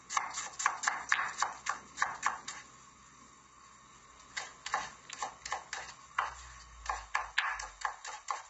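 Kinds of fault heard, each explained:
Low-delay AAC compression: The audio was likely squeezed through a low-delay AAC codec such as AAC-ELD at a very low rate. Its short frames buy quick transmission but spend bits poorly, so fine tonal detail is smeared and quantisation noise fills the gaps. Here the damage is heavy, which fits a bitrate around 16 kbps: the sound turns rough and grainy throughout, and nothing survives above 7.7 kHz, leaving a dull, capped top.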